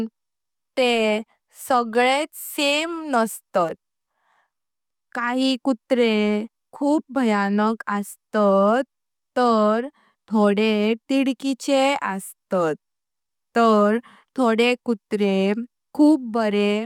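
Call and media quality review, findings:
Nothing to flag on this speech recording; no audible faults turned up anywhere in it.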